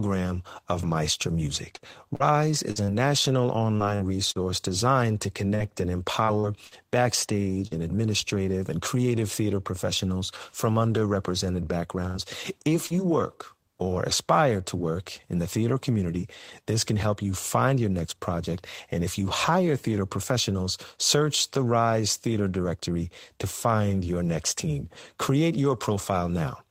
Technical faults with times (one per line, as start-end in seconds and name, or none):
1.75-4.38 repeated packet loss (robotic sound)
5.55-7.74 repeated packet loss (robotic sound)
12.07-12.17 burst of packet loss
12.86-12.93 short concealed packet loss